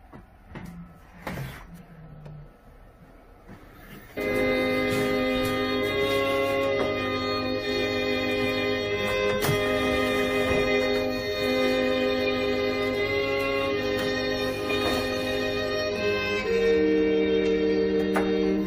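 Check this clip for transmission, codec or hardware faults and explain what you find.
I found no faults in this clip.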